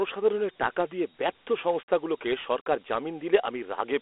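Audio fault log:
throughout, Dialogic VOX ADPCM: telephone-band speech, nothing above 3.8 kHz, with gritty hiss trailing the voice from coarse 4-bit adaptive steps, fitting a 32 kbps encoding.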